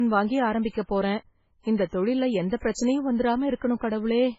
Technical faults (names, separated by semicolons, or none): low-bitrate audio saved at a high bitrate